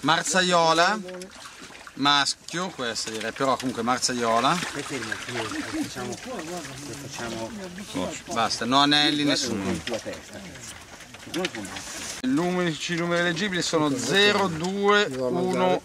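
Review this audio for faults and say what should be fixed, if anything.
From 6.01 to 7.82 s there are GSM signalling bursts: a galloping dit-dit-dit of short buzzes at a 217 Hz repetition rate, sitting roughly 20 dB below the programme. A nearby 2G handset is transmitting only intermittent groups of radio bursts while it registers or signals, and a non-linear junction somewhere in the audio path demodulates the RF envelope into audible clicks. To prevent it, keep mobile handsets switched off or well away from the rig and microphone cabling.

From 7.88 to 10.30 s this gives way to continuous GSM phone buzz, a hard, raspy 217 Hz tone with a dense harmonic series, about 32 dB below the signal and unrelated to the programme material. The handset has moved into a call and now transmits its time-slot bursts 217 times a second without gaps. The same rectification in the audio circuitry turns that pulse train into a steady buzz. 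To prevent it, use shielded, balanced cabling with RF filtering or ferrites at the inputs, and keep active phones out of the recording area.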